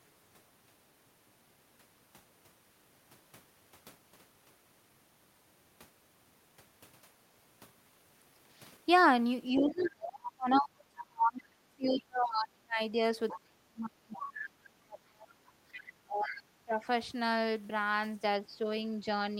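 From 9.53 to 16.78 s you get speech suppressed in double talk. The talker keeps dipping, sometimes by roughly 35 dB, for around five seconds in total. That's likely the echo canceller ducking everything while both sides talk at once.

Inside that stretch, the other side's voice leaks through at 9.81–12.02 s, 13.28–14.16 s and 15.73–16.32 s. It sits about 15 dB under the talker and is likely residual echo the canceller didn't remove.

At 15.65–15.69 s the background is gated by the echo canceller. The room sound drops about 10 dB for a brief moment, then returns.

Double-talk suppression hits once more at 18.42–18.6 s, with a shallower dip of around 10 dB that is likely the same canceller clamping down.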